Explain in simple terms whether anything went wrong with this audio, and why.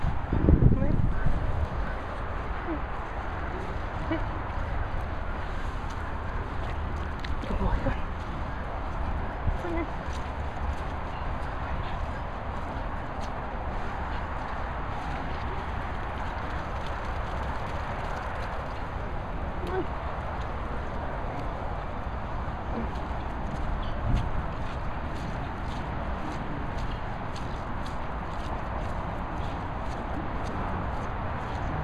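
Nothing went wrong here: no dropouts, glitches, distortion or other faults turn up anywhere in the recording.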